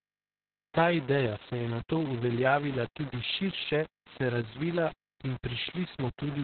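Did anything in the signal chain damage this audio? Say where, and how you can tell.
Yes. At the sample-format conversion stage, grainy distortion runs through the whole clip, tracking the speech and sitting only about 15 dB below it. The likely cause is requantization to a very coarse word length, fitting about 5 bits, rounded without dither, so the error follows the signal.

At the codec stage, Opus voice compression has narrowed everything to below about 4.3 kHz throughout, leaving the speech muffled, hoarse and somewhat robotic. That points to narrowband SILK coding at a rate near 6 kbps, where the excitation is coded very coarsely.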